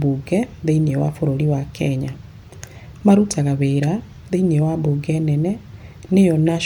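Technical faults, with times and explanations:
No technical faults can be heard in this speech clip.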